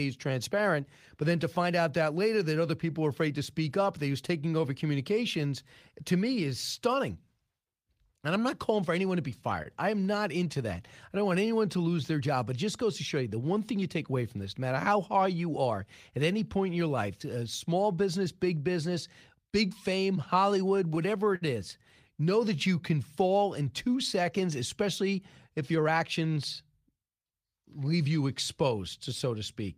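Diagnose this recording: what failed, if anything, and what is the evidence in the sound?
Short stall from a late packet, network/jitter buffer: at 9.63–9.67 s, after "for anyone to be", a sound is held about 27 ms too long before "I am not into".

Jitter buffer slow-down: from 11.18 to 11.64 s, just before "to lose their job", speech drags at 93% speed, same pitch, as repeated pitch periods add 38 ms.

Repeated stalls (stutter), network delivery: between 20.50 and 21.43 s the buffer ran dry five times, padding 94 ms in total, longest gap 57 ms, giving audible dragging.

Jitter buffer speed-up: after "fall in two seconds", 24.82–26.19 s runs hurried at 105% speed, same pitch, as the receiver trimmed around 70 ms to shed excess delay.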